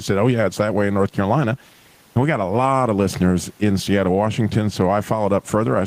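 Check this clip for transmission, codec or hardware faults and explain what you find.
There's one fault here, and it runs through the whole clip: gain pumping. The background keeps swelling up in the pauses and then ducking under each loud stretch of speech, with a swing of roughly 10 dB. That likely comes from the input gain being set far too high and a fast limiter or compressor clamping down on every peak. Loud and quiet parts end up squeezed together, so the speech sounds squashed, and the room noise, sitting about 43 dB below the speech, rides up and down with it.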